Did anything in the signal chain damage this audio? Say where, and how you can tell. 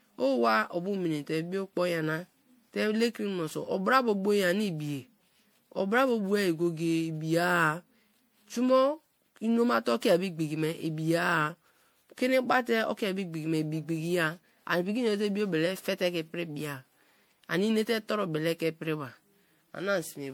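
Yes, at the codec stage: generation loss runs through the whole speech clip, with a swirly, hollow, smeared texture and blurred attacks, likely from around seven MP3 re-encodes at what sounds like 96 kbit/s. A spectrogram shows accumulating spectral holes and nothing above 20.8 kHz.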